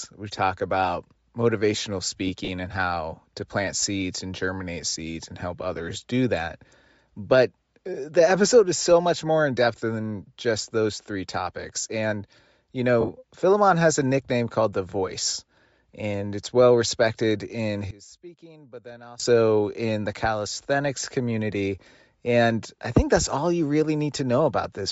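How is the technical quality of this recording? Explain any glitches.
The recording has a few clear problems: constant codec coloration, two short dropouts and one stretch where the speech nearly disappears.

Throughout, the speech has a breathy, grainy edge with a hazy top end. That's likely Bluetooth LC3 compression at a low rate. It fits roughly 32 kbps with 10 ms frames, where the codec drops much of the upper spectrum and fills the gap with noise.

There are two lost LE Audio frames events. At 2.45 to 2.49 s, a 30 ms gap, consistent with three 10 ms frames, turns into a brief noisy smear. The decoder patches it by repeating the last spectrum with scrambled phase. At 13.01 to 13.10 s, about 60 ms goes missing in short bursts across 80 ms, giving a noisy smear.

From 17.91 to 19.20 s, the speech drops by about 22 dB and goes faint. That points to one channel inverted. With reversed polarity on one side, the centred speech cancels when the channels are summed to mono, leaving only their small difference.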